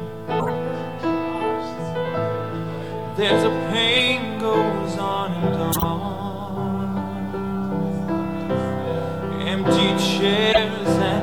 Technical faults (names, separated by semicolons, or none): compressed frames skipped; corrupt frame decoded